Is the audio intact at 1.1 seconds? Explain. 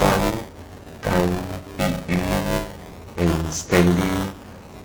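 No. At 1.1 s the audio has two faults.

The first is buffer tearing, which runs through the whole clip. The program filling the playback ring buffer and the hardware reading it have slipped out of step. They cross inside every period. So a large part of each buffer, well over a third, holds sound from roughly 10 ms earlier, with hard joins on both sides. That repeats at about 345 Hz, which fits a 128-sample buffer. It is heard as a steady robotic buzz riding on the speech.

The second is repeated stalls (stutter), from 0.83 to 1.63 s. Packets arrived late, so the jitter buffer kept running dry. There were six short gaps, the longest 11 ms, about 62 ms in all. Each gap was filled by continuing the last sound. Nothing is lost, but the speech drags and hiccups across this span.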